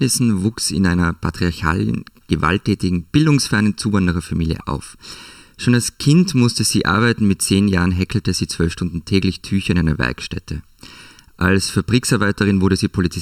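Speech runs the full length of the recording with a hollow, phasey colour caused by channel delay (comb filtering). One channel arrives a little under a millisecond behind the other, and when the two are folded to mono the shared sound cancels at evenly spaced frequencies, the first dip sitting around 700 Hz. Unlike flanging, these notches never sweep or move, and unlike a plain treble cut, the dullness comes from repeating gaps rather than a single roll-off.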